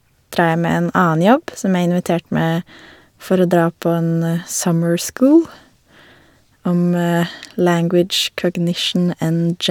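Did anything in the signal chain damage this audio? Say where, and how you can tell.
No, nothing along the chain seems to have harmed this speech recording, and there's no point in it where something audibly goes wrong.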